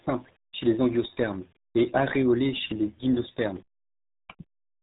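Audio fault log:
throughout RealAudio 14.4 codec: heavy low-rate speech coding, pointing to roughly 8 kbit/s, removes everything above 3.8 kHz, leaving the speech muffled and gargly.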